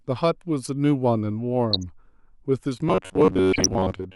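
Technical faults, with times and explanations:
1.71–1.83 s and 3.52–3.66 s: DAB burbling. Short blips of noise sit over the speech for roughly a tenth of a second each time. Bit errors from weak reception slipped past error correction and corrupted samples and scale factors, so individual sub-bands jump in level frame by frame.
2.89–4.16 s: robotic sound from repeated short buffers. The speech becomes a rigid metallic buzz at 93.8 Hz that still loosely tracks the syllables. This is likely a short block of about 10.7 ms being replayed while most of the real audio is skipped, imposing that fixed pitch.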